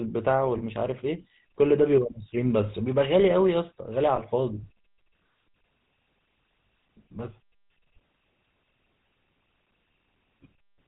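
GSM full-rate codec damage runs through the whole of this speech clip, plainly audible as a buzzy, gravelly roughness with nothing above 4 kHz. The vocal tract is modelled and driven by regularly spaced pulses from a thinned excitation, which fits the 13 kbps full-rate coder. Lost GSM frames appear at 0.58 to 0.62 s and again at 4.16 to 4.20 s. Each time, about 20 ms of signal, consistent with a single frame, is filled by repeating the last good frame, which leaves a brief rough, metallic ring.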